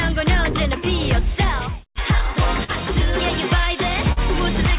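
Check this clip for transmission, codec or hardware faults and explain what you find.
A few network-timing problems here, all riding on a narrowband call path where nothing gets through above 4 kHz, which fits G.711 A-law at 64 kbps.

Clock drift between sender and receiver runs through the whole clip. The sender's clock is about 3 percent slow, so the jitter buffer keeps draining, and small timing hiccups recur at uneven spacing.

Scattered short gaps show up between 0.52 and 1.62 s. About four tiny holes, each a few milliseconds, get patched by continuing the last sound, leaving brief ticks or smears.

There are two short stalls from late packets, at 2.64 to 2.70 s and 4.12 to 4.19 s. In each, the buffer ran dry and the last sound was held about 44 ms before carrying on, with nothing lost.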